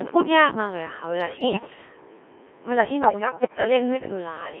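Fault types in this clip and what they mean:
Codec 2 vocoder: speech is coded at what sounds like 1.3 kbit/s and rebuilt from pitch and spectral envelope, heavily robotic and buzzy within 300 Hz to 3.4 kHz.
bit errors on digital voice radio: roughly one bit in ten corrupted scrambles frame parameters, so pitch, level and tone lurch into warbling gibberish in two bursts.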